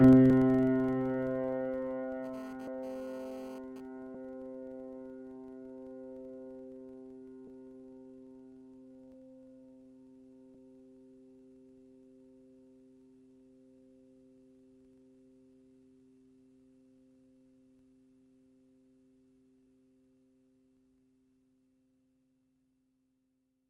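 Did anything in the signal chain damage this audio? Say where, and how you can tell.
Yes. A filter restarted on every block runs through the whole clip as a buzz near 23.4 Hz that rises and falls with the level. In the driver or buffer stage, a filter loses its state at each boundary, which fits a 2048-sample block, and restarts from silence, leaving a small transient every time.

Compressed frames skipped at 0.30 s and again at 2.67 s, in the codec or storage stage. The sound jumps forward by about a tenth of a second at the first point and roughly three tenths at the second, multiples of a 32 ms frame.

GSM phone buzz from 2.24 to 3.80 s, entering through the analogue wiring. A harsh, harmonically rich rasp at 216.7 Hz sits about 23 dB below the signal and comes and goes as a nearby 2G phone transfers data, its radio bursts rectified by the audio circuit.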